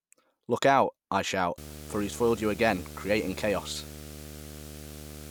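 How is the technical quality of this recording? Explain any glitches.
The recording is compromised by one fault, video or display buzz, running from 1.58 s to the end at 5.30 s, starting right after "out I shout". A screen or video cable is coupling interference into the audio path, producing a 75 Hz buzz at the display's field rate with a hashy edge above it. It sits about 15 dB below the speech.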